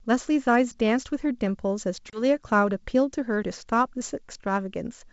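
At 2.10 s the speech drops into a hard-edged gap of about 30 ms. This is packet loss on an ADPCM call, with a few packets missing and filled with silence. The decoder's predictor and step size lose track of the sender's, so the speech comes back slightly distorted. It settles by 2.24 s. Around it, the G.722 wideband coding sounds clean up to 7 kHz, which fits the full 64 kbit/s mode.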